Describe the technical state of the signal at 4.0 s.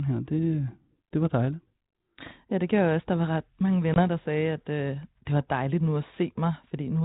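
At 4.0 s there's packet loss on the ADPCM call, about one packet (20 ms) dropped to silence between "var ret mange" and "der sagde at øh", around 3.94–4.02 s. The 32 kbit/s G.726 decoder loses its predictor and step-size sync, so the sound comes back with brief distortion before settling.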